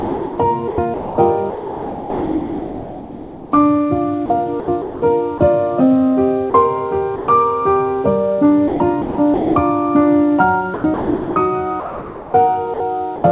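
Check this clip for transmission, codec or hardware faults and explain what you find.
Two voice-detector faults are present, on a call path whose band stops at 4 kHz, which fits G.711 A-law at 64 kbps.

Sound chopped by the voice detector: 0.00–3.52 s, 4.26–5.40 s, 8.68–9.56 s and 10.74–13.24 s. The sender likely gated sound on and off repeatedly, filling gaps with comfort noise. About 2.7 s, 0.34 s, 0.5 s and 1.2 s were replaced. Sound turns choppy.

Sound dropped by the voice detector: 6.50–6.54 s (40 ms) and 7.16–7.28 s (120 ms). Quiet sound was likely mistaken for background, so sending stopped. Comfort noise filled each gap. The sound briefly gives way to steady noise, then returns.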